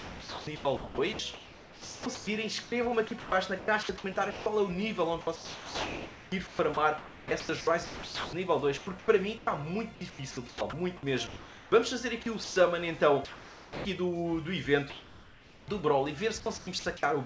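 From 0.0 to 4.46 s, and again from 5.21 to 10.73 s, the sound is chopped by the voice detector. Quieter stretches keep dropping out and getting swapped for a synthetic hiss, more than two seconds of it in each span, so the audio stutters and the background flickers between real and fake. The likely cause is the sender's detector toggling transmission on and off.

At 11.27 to 11.72 s you get comfort noise in place of the background. The real room tone, sitting about 20 dB under the loud parts, gives way to a flat, featureless hiss at nearly the same level, likely because the sender paused and the receiver filled the gap.

A short chop follows at 12.23 to 12.56 s. Comfort noise comes back at 13.25 to 13.85 s and 14.90 to 15.68 s, the second of those about 1 dB louder than the real background. A final chop lands at 16.40 to 17.03 s.

Throughout, nothing above 8 kHz comes through, which fits a G.722 call codec.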